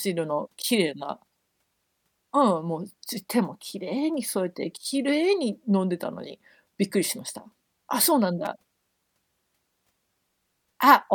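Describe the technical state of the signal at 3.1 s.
At 3.1 s the signal is intact, with no audible fault at that moment.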